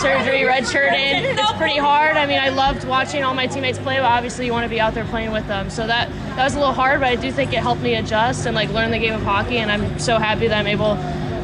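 No dropouts, glitches, level jumps or distortion events occur anywhere in the clip, and the signal runs continuous and stable throughout.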